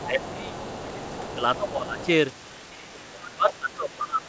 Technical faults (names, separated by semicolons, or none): other side's voice leaking through; speech suppressed in double talk